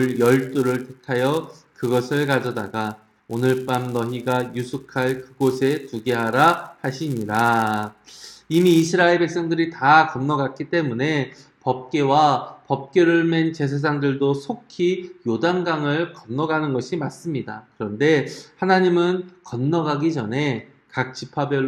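From the start to about 8.88 s the audio carries a 200 Hz buzz from a filter restarted on every block. Each block begins from a cleared state, so its onset ticks. Unlike steady mains hum, this buzz rises and falls with the signal's level.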